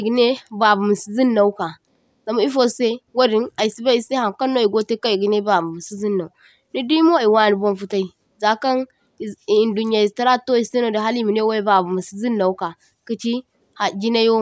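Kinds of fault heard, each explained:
No kinds of fault are heard in this clip.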